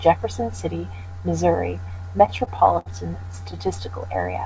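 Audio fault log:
2.26–3.71 s, repeated stalls (stutter): the jitter buffer ran empty fourteen times here. Each time, the receiver stretched the last sound until packets caught up, for 238 ms in total, with the longest gap at 70 ms and 16% of the span concealed. Nothing is lost, so the speech drags and judders instead of dropping out. A spectrogram shows brief smeared, frozen stretches below the call path's 8 kHz ceiling. The waveform shows repeated cycles that fade in the longer gaps.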